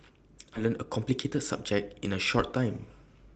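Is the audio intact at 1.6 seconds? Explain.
No. From 0.65 to 1.74 s, a jitter buffer speed-up is under way: the receiver's buffer had built up more audio than it targets, so it trimmed short slices, each a pitch period or a few long, over and over to bring the delay back down. Around a tenth of a second is dropped across that stretch, so at 1.6 s the speech runs about 107% of normal speed with unchanged pitch and sounds slightly rushed.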